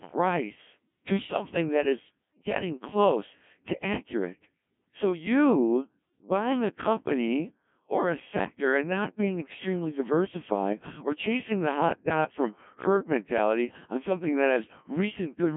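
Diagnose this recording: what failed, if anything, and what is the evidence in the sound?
Codec stage, Codec 2 vocoder: the speech is robotic and buzzy throughout and cut off above 3.5 kHz. Unlike a waveform codec, it resynthesises from sine waves, which fits roughly 1.3 kbit/s.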